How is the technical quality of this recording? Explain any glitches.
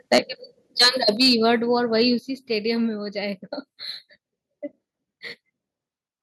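The technical quality is poor: the opening two seconds show repeated distortion and abrupt level drops.

Microphone overload: From 0.12 to 0.18 s and again from 0.79 to 1.34 s, the input gain was likely set too high. The loudest peaks ran about 8 dB and about 7 dB past the converter's ceiling and had their tops sliced off. That gives a harsh, crackling edge, strongest in the first burst, where roughly a tenth of the waveform is flattened.

Microphone volume stepped down: At 0.18, 1.17 and 2.19 s, software likely reacted to the clipping by cutting the device's input gain in one jump, by about 4, 4 and then 7 dB. Each time, the voice and the background fall suddenly in loudness.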